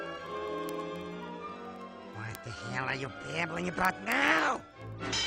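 Steady word clock ticks run through the sound from 0.10 s to 5.24 s, roughly twenty a second, as an unlocked receiver slips a sample each time the clocks drift past each other.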